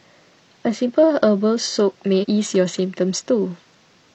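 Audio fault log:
2.19–2.25 s, damaged data in a compressed stream: part of the encoded speech stream arrives corrupted, so the decoder cannot read the frames covering these 66 ms correctly and has to lose its place and hunt for the next valid frame header before decoding resumes. The misread data comes out as a chirp, squawk, click or short hole breaking into the speech, with normal sound returning once sync is found.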